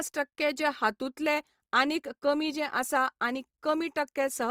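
Speech, with plainly audible grainy, rough noisiness across the whole clip despite content reaching about 20.2 kHz, likely Opus compression in music mode, fitting roughly 24 kbps.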